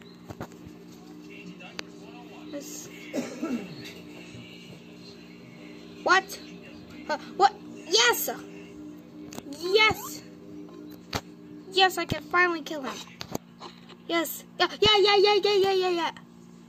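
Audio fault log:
No faults heard.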